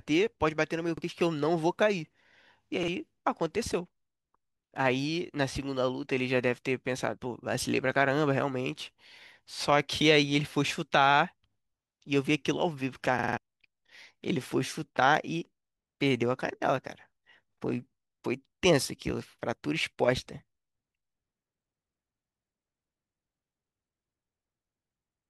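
At 0.98, 2.83 and 4.13 s, a repeated buffer replays a 46 ms slice of speech once with a hard join, which fits a late 2048-sample buffer. At 13.19 to 13.38 s it repeats four times, giving a longer stutter. Unlike a dropout, there's no silence, only the same fragment again.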